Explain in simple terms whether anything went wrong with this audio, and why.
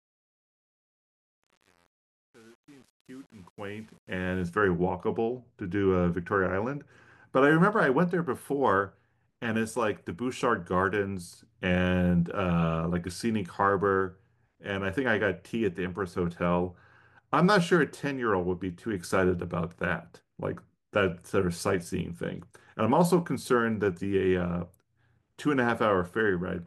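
The fade-in at the start has truncation distortion. From 0 to about 4.2 s, the quiet speech sounds gritty, because the fade kept too few bits, which fits 8-bit steps with no dither. The fade cleans up by 4.48 s.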